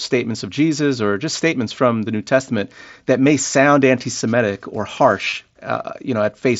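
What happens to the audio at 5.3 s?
Concealed Bluetooth headset packet loss occurs from 5.25 to 5.32 s. Dropped packets were patched by repeating recent waveform, giving brief buzzy stutters totalling about 45 ms, scattered over 75 ms.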